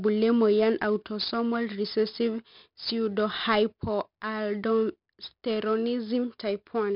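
4-bit ADPCM compression runs through the whole speech clip. Each sample is coded as a coarse 4-bit step from a prediction, so heavy gritty hiss rides on every loud syllable and sharp onsets distort. Nothing sounds above 5.3 kHz, which fits a low sample rate near 11 kHz.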